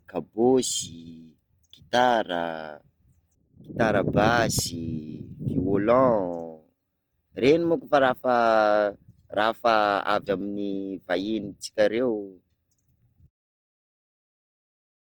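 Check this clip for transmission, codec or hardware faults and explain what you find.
The clip has one fault, present for its whole length: the grainy texture points to likely Opus compression at a low bitrate. The roughness fits a rate around 24 kbps with the encoder in its CELT music mode. That mode keeps each band's energy but, short of bits, fills band detail with folded copies of lower bands or with noise. The speech sounds plainly rough and grainy rather than swirly. Bandwidth stays full, reaching about 20.1 kHz, so it isn't muffled.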